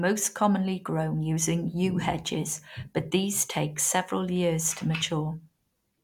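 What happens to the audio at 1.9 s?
Nothing goes wrong at 1.9 s: the speech carries on intact through that moment with no audible fault.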